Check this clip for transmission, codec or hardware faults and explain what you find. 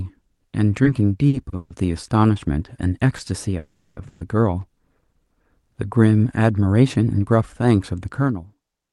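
The clip has three kinds of network playback fault: a burst of stuttering, one brief stall, and two audio freezes. Nothing is lost in any of them; the sound is held or stretched and then resumes from where it stopped.

From 0.83 to 1.73 s there are repeated stalls (stutter): four separate gaps in under a second. Packets were arriving late or too slowly, so the jitter buffer kept running dry, and each time the receiver extended the last sound until data came in. About 230 ms of that span is filled this way, roughly a quarter of it, with the longest gap at 140 ms. The result is a dragging, hiccupping rhythm. What sets it apart from a single stall is the cluster of short holds in quick succession.

At 3.17 to 3.22 s there is a short stall from a late packet. One packet missed its slot, and the receiver stretched the preceding sound by 20 ms until it arrived, then carried on at the same point. 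This is heard as a barely lengthened sound with a faint buzz or dip. It is an isolated event, far too brief and with no fade, which is why it doesn't count as a freeze.

There are two call audio freezes, at 3.59 to 4.00 s and at 4.09 to 4.24 s. In the first, the last sound is continued as a fading buzz for about 380 ms, with the final 50 ms gone to silence. The second is a 120 ms fading hold with no silent stretch. The cause is likely packets held up in transit that emptied the jitter buffer, and the audio resumes without skipping anything. The audible fade-out over a longer wait is what distinguishes a freeze from the brief stall just before it.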